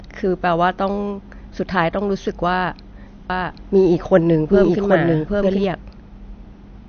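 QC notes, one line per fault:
Throughout: MP3 compression. The sound is plainly watery and swirly, with metallic chirping on s sounds and softened, smeared onsets, and nothing is heard above 6.5 kHz. This is likely an MP3 encoder starved of bits, consistent with a low bitrate around 48 kbps. To save data it cuts the treble at a fixed point and drops weaker frequency components, which then flicker in and out from frame to frame. That flickering is what makes the sound seem to swirl.
3.30 to 5.64 s: doubled audio track. A second full-band copy of the sound runs behind the original by roughly 0.7 s at about the same loudness, so everything is heard twice in an overlapping, confusing layer. The copy has no reverberant tail or room colour and switches on and off abruptly at both ends. This likely comes from the same audio being mixed in a second time, either through a slower capture path or an edit that left two out-of-step copies.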